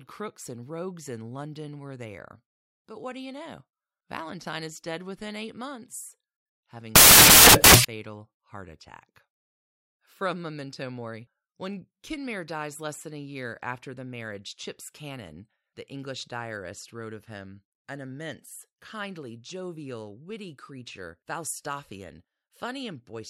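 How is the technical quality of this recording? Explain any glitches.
The recording has one clear glitch. From 6.96 to 7.85 s, just after "within eight months having", the samples are built from the wrong bytes. The low, rapidly changing bits end up as each sample's large part, giving loud, harsh broadband noise, a full-height spectrogram band and a dense, filled-out waveform.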